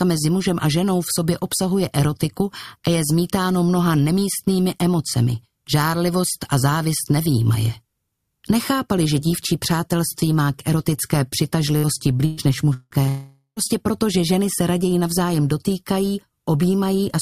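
Two bursts of packet loss come first. At 11.77 s a short run of packets fails to arrive in time, and the receiver fills roughly 60 ms by extending and fading the last sound, so a brief held buzz or hiss replaces the missing 60 ms. At 12.25 s a longer burst leaves 120 ms missing. The concealment stretches the last sound across about 120 ms with no silence, and the audio picks up further along.

Two longer gaps follow, each likely a long network dropout where no audio reached the receiver. From 12.73 to 12.94 s the last sound is carried on as a fading buzz or hiss for about 170 ms, then about 30 ms of silence, and roughly 180 ms of material is lost. From 13.09 to 13.59 s the fill stretches out for about 480 ms and decays into about 110 ms of silence. Close to half a second is missing when the audio returns.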